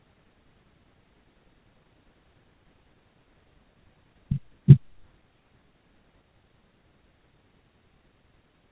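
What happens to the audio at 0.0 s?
At 0.0 s the speech is intact, with nothing to hear beyond the narrowband character of the call path, whose content stops at about 4 kHz.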